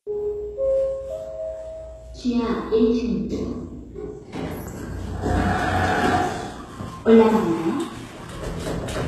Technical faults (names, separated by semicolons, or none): HE-AAC compression